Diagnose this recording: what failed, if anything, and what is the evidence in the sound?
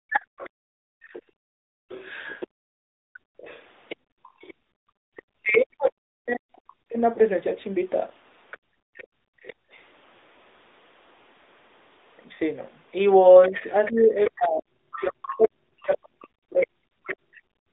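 AMR narrowband mobile codec, throughout (codec stage): the sound is confined to roughly 250 Hz to 3.7 kHz and is plainly buzzy and synthetic, consistent with AMR-NB at 10.2 kbps.

Speech suppressed in double talk at 0.0–1.83 s, 5.39–6.98 s and 13.49–17.69 s (call processing): the talker dips by up to about 40 dB, likely because the echo canceller attenuated both sides during overlap.

Other side's voice leaking through at 0.38–7.0 s, about 20 dB below the talker, and 13.42–17.39 s, about 15 dB below (call processing): a second voice is audible, likely residual loudspeaker echo the canceller missed.

Lost AMR speech frames at 7.14–7.18 s (network/radio): a brief 20 ms dip or warble where one frame failed and the decoder concealed it with faded parameters.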